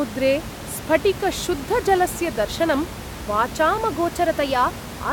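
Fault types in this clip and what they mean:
Drift correction step: from 3.93 s to the end, speech runs 6.5% fast and about 109 cents sharp, likely a clock-matching resampler jumping its rate to rebalance a buffer.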